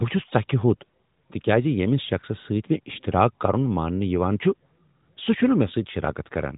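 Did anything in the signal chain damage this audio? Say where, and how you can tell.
No, nothing stood out on listening that would point to damage at any stage of the chain.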